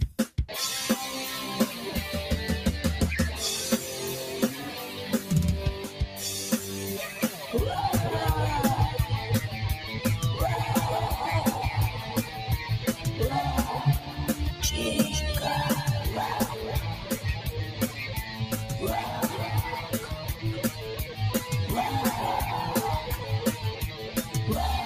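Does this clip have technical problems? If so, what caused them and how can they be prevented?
Yes. A noise suppressor applied to music or sounds runs throughout. It treats steady, sustained content as noise, so levels swing by roughly 5 dB and the sound pumps and thins. The waveform envelope wobbles, and the spectrogram shows tails fading early while onsets stay intact. Bypass speech-oriented suppression on non-speech material.

The sound is cut by the noise suppressor at 5.89–6.18, 14.0–14.19, 16.95–17.17, 17.65–18.46, 19.82–20.45, 20.69–20.85 and 23.82–24.35 s. Held or decaying passages dip by about 5 to 6 dB, showing as dimmed spectrogram bands and a shrinking waveform. Disabling the suppressor prevents these dips.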